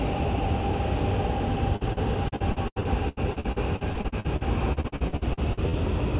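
From 1.76 s to 5.76 s, repeated packet loss (robotic sound) sets in. There are 26 dropouts, the longest 82 ms, each patched by extending the preceding sound, so 28% of that span is concealed and the audio turns choppy; the whole clip is band-limited to 4 kHz by the G.711 mu-law call codec.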